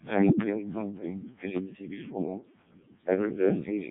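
From start to finish the speech has gone through the Codec 2 vocoder, pushed hard enough that it points to the lowest 0.7 kbit/s mode. Only pitch, voicing, energy and a rough spectral shape survive, rebuilt from sine waves, so it's robotic and buzzy, with nothing above 3.8 kHz.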